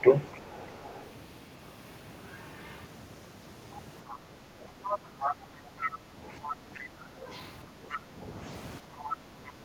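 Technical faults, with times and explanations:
0.01–0.07 s: speech suppressed in double talk. The opening speech dips briefly, by roughly 10 dB, likely the canceller ducking the talker while both sides overlapped.
0.33–1.1 s, 4.1–6.83 s, 7.85–7.98 s, 9.02–9.51 s: other side's voice leaking through. A second voice sits faintly under the talker, around 30 dB down at first, nearer 15–20 dB later, likely residual loudspeaker echo left uncancelled.
4.98–5.76 s, 8.81–9.65 s: background gated by the echo canceller. Room sound drops by about 8–9 dB for roughly 0.7 s each time, as the canceller clamps the microphone during loudspeaker playback.
7.94–7.99 s: speech suppressed in double talk. A brief dip of roughly 5 dB, likely the canceller attenuating the talker while the leaked voice overlapped.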